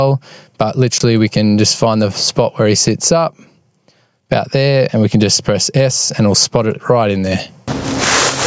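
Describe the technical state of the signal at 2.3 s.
At 2.3 s, gain pumping is present, as it is throughout. The gain ducks under loud sounds by about 25 dB, likely from excessive gain feeding a fast limiter.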